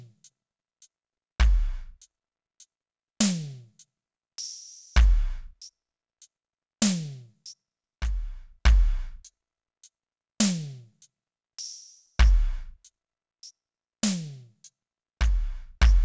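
Music, played throughout at the wrong sample rate: everything runs at about two-thirds speed and sits roughly 7 semitones low, which fits 24 kHz material played at 16 kHz. Unlike a pitch shift or time-stretch, tempo and pitch fall together by the same ratio.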